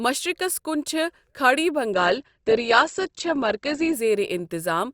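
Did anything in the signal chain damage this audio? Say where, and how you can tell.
Yes. The damage sits at the network and codec stage: an adaptive stream at a lower bitrate ran from 1.93 s to 3.93 s. The speech turns suddenly dull, with no gap at either boundary. On a spectrogram, energy above 8.1 kHz vanishes for those two seconds and then returns abruptly, while the waveform stays continuous. This fits the player switching from roughly 64 kbit/s Opus to a 16 kbit/s version while the connection slowed.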